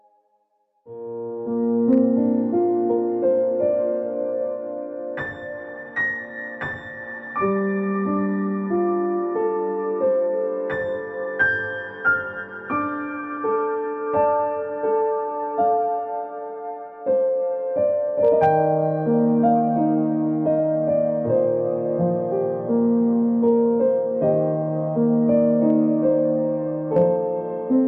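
Hard clipping appears on brief peaks at 1.93–1.98 s, 11.42 s, 18.25–18.55 s, 19.46 s, 23.48 s, 25.70–25.79 s and 26.97–27.02 s. The level exceeds what the chain can pass, by about 2 dB at most, so the peaks are cut flat and heard as small crackles, longest around 18.3 s. The waveform shows squared-off tops, and the spectrogram shows vertical smears of high harmonics at each instant.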